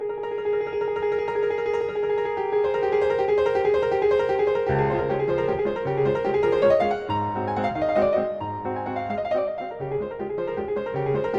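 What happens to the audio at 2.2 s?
Nothing goes wrong at 2.2 s: the audio runs on cleanly through that moment with no dropout, click, distortion or other audible fault.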